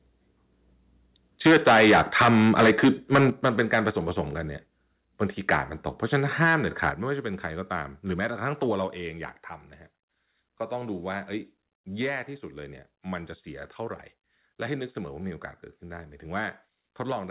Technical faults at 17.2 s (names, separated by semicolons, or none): none